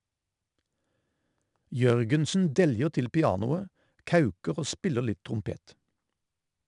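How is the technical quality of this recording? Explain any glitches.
The quality takes a clear hit from 4-bit ADPCM compression running through the whole speech clip. Each sample is coded as a coarse 4-bit step from a prediction, so there's a gritty hiss riding on every loud passage. Nothing comes through above about 10.6 kHz, which fits a low sample rate and a stream of around 89 kbps.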